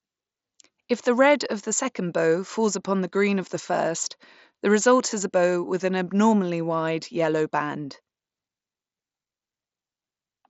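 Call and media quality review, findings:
No faults found in the speech clip. The Bluetooth mSBC headset path carries the speech up to about 8 kHz, with only the light coding texture expected from that codec.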